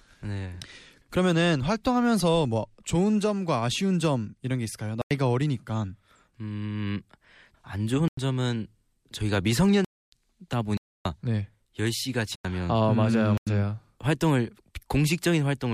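Six blocks of digital silence interrupt the speech: 5.02–5.11, 8.08–8.17, 9.85–10.12, 10.77–11.05, 12.35–12.45 and 13.38–13.47 s. The four short holes each last 93 ms, which fits a 4096-sample output buffer left unfilled in time. The two 279 ms gaps are exactly three such buffers. Each gap cuts out and returns with no fade. A fade-out or concealed packet loss would instead smooth or fill the gap.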